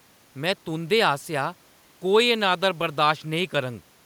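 No technical faults are audible in this recording.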